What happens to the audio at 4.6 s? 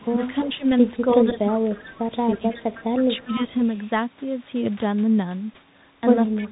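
At 4.6 s the speech is still carrying the Bluetooth CVSD headset codec damage that runs through the whole clip. CVSD encodes each sample as a single up-or-down bit with an adaptive step, and nothing above 3.8 kHz survives, so the speech sounds narrow and muffled, with scratchy s sounds and a granular hiss underneath. A spectrogram shows a hard ceiling near 3.8 kHz, and the waveform looks stair-stepped on fast rises.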